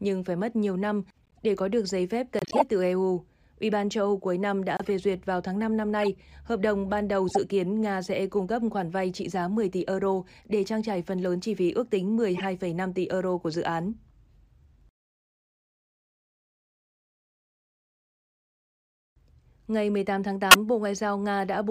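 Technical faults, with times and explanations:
1.22–1.39 s, 2.39–2.62 s, 4.77–4.86 s, 6.02–6.08 s, 7.29–7.37 s, 12.36–12.42 s and 20.51–20.56 s: corrupt frame decoded. Damaged compressed frames were played as if valid, so misread gains and codes put energy at the wrong frequencies. Each event is a short chirp or noisy burst lasting a few frames' length, not a single-sample click. The first is faint, near about -50 dBFS. The rest are louder, peaking around -5 dBFS at 2.4 s and 20.5 s.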